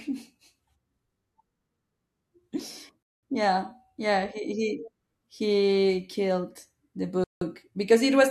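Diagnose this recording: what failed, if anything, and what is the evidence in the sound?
Rebuffering stall at 3.03 to 3.23 s and again at 7.24 to 7.41 s, a playback-stage failure in the streaming player. In each case the speech drops to silence and then carries on from exactly the syllable where it stopped, with nothing skipped. The player drained its downloaded buffer and waited for more data to arrive, adding about 200 ms and then 175 ms of dead air without losing any of the audio.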